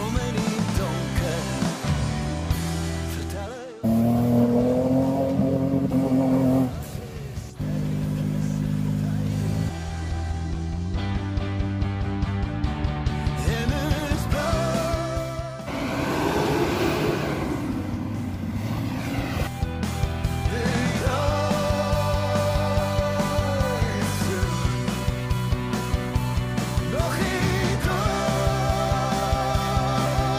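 No technical fault can be heard anywhere in this recording. Nothing in the audio breaks, drops out or changes in a way that points to a problem in the chain that carried it.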